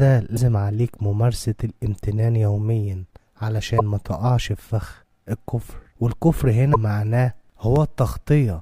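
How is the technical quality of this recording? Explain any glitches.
The recording has five short glitches of two kinds.

At 0.35–0.38 s, 3.78–3.81 s and 6.73–6.76 s there is a broken MP3 bit reservoir, most likely from dropped frames. The audio skips ahead, and for about one 26.1 ms frame the decoder reads borrowed bytes from the wrong frame, giving a brief garbled disturbance.

At 6.11 s and 7.76 s a block of digital silence appears, lasting 2.9 ms and 1.45 ms, which fits 128-sample and 64-sample buffers left unfilled. The signal drops abruptly to zero and back without a fade, so each gap sounds like a tick.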